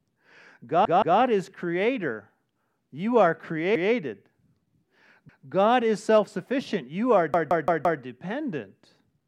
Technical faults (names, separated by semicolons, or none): repeated buffer